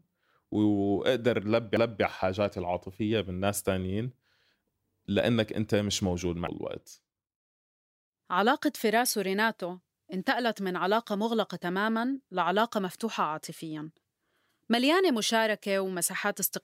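At 1.77 s and again at 6.48 s the speech shows a CD skip: the pickup laser lost tracking and landed on a different turn of the spiral. Each is heard as a tick, a mute of only a few milliseconds, then playback resuming from a displaced point.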